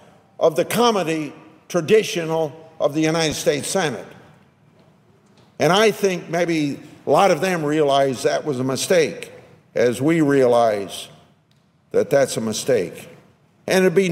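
At 3.31 s there is a brief noisy smear, a tiny grainy blur. That is a lost LE Audio frame: about 7.5 ms went missing, and the LC3 decoder refilled the gap by repeating the previous spectrum with random signs.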